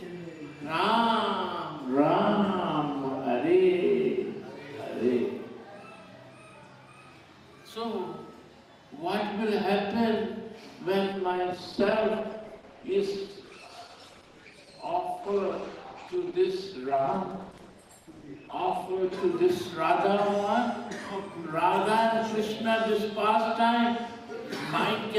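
At 11.13 s the quality suddenly sags with no gap: it's the adaptive stream at a lower bitrate. The connection slowed, so the player switched down, which fits Opus going from 64 to 16 kbit/s. Treble is gone above 12.1 kHz, with codec artefacts rising until 19.13 s.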